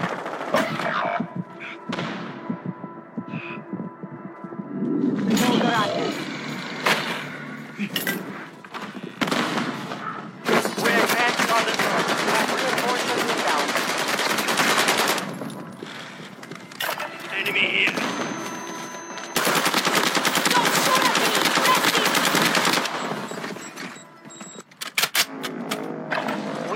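At 1.95–2.01 s, 7.39–7.43 s and 23.22–23.27 s, damaged data in the compressed stream makes the decoder misread corrupt frames and lose sync. Each event is a brief garbled blip, seen as a short broadband smear with a jagged discontinuity in the waveform.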